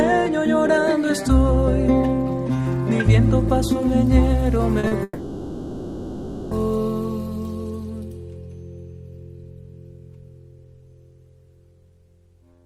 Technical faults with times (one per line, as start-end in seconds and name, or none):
4.79-4.94 short concealed packet loss
5.03-6.54 long network dropout